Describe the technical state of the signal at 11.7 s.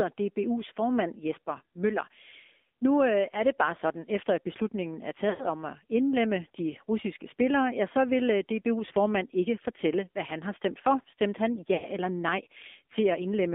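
At 11.7 s the speech drops out through lost AMR speech frames, from 11.74 to 11.86 s, just before "eller nej". About 100 ms is missing, which fits five 20 ms frames failing their radio checksum. The decoder repeats its last pitch and vocal-tract settings at falling gain, so the sound smears and fades before the speech returns.

Underneath runs the AMR narrowband mobile codec at 7.4 kbps. The line passes only about 250 Hz to 3.6 kHz. Speech is rebuilt from a vocal-tract model driven by sparse pulses, and at this low rate it sounds plainly buzzy and synthetic.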